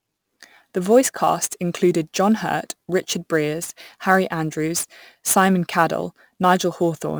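A recorded speech clip carries a gritty hiss that rides on the sound throughout, swelling on loud and bright passages and vanishing in pauses. That is sample clock jitter: the converter's timing wanders by several microseconds, leaving an error only about 20 dB below the speech.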